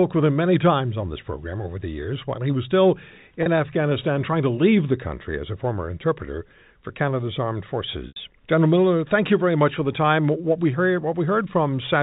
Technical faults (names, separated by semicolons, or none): packet loss with pitch repetition